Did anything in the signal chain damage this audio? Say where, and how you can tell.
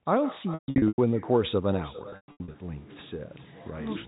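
Yes. The call processing has an echo with no canceller. The talker's voice returns roughly 0.4 s later, about 17 dB down and thin, looping back through the far end's loudspeaker.

The network has packet loss with pitch repetition at 0.54–0.98 s and 2.10–2.54 s. You hear buzzy held stretches up to 140 ms that fade out, then cross-fade back in.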